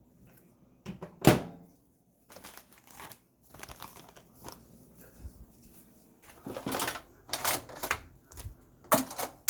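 Nothing stood out on listening to these sounds; no technical problem could be heard at any point.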